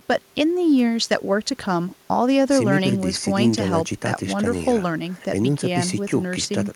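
No technical faults occur at any point in this speech recording.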